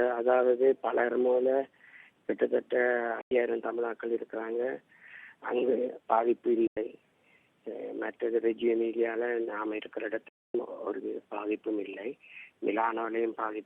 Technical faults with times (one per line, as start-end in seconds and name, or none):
3.21-3.31 digital broadcast dropout
6.67-6.77 digital broadcast dropout
10.28-10.55 digital broadcast dropout